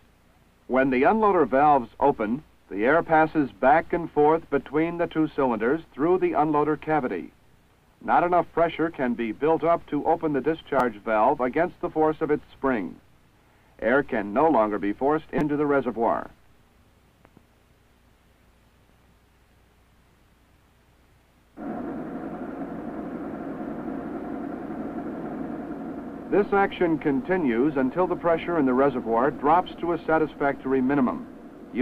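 At 10.79 s, a repeated buffer occurs. New audio arrived late, so one 5.8 ms piece, which fits a 256-sample buffer, plays twice more. It sounds like a brief buzz. From 15.38 to 15.41 s, four repeats buzz longer. About 20 ms of sound is lost.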